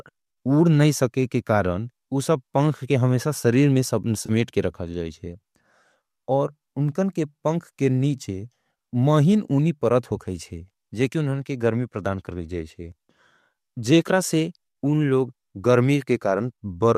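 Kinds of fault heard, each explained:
AAC frame loss with concealment: from 4.26 to 4.31 s, about 30 ms is rebuilt from the preceding spectrum, likely within an AAC-ELD stream, giving a brief smeared, noisy blip. A spectrogram shows harmonics blurring into a short broadband smudge; the waveform shows no true gap.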